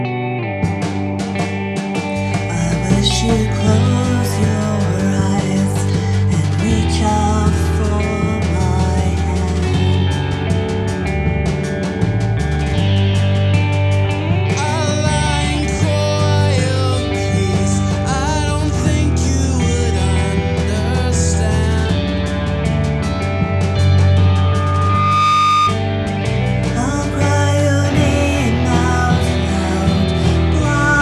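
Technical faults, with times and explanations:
24.17–25.81 s: loudspeaker feedback squeal, a 1.2 kHz tone swelling over about a second to roughly 5 dB above the programme, as mic-to-speaker loop gain exceeds unity.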